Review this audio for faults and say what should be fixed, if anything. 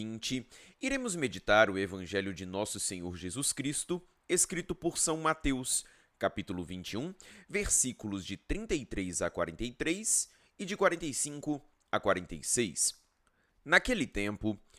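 Nothing in the speech calls for a fix; no faults found.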